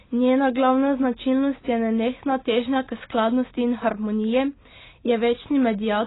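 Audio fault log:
Throughout, AAC compression: the speech is dull, with nothing above 3.9 kHz, and heavily smeared. The damage likely comes from AAC-LC coding at a very low bitrate, around 16 kbps. Its smearing sets it apart from a clean low-pass filter.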